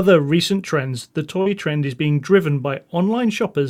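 At 1.41 to 1.48 s, short concealed packet loss: about 40 ms never arrived in time, so the receiver extended the preceding sound, leaving a brief smear or wobble.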